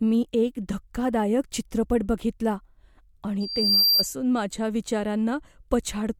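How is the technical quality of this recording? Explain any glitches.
The recording is marred by one clear fault in the speech, a loudspeaker feedback squeal. From 3.40 to 4.07 s, a microphone re-amplifies its own loudspeaker, and at about 4.7 kHz the loop gain exceeds one. A pure tone swells over roughly 0.4 s into a squeal that ends up a few dB louder than the speech.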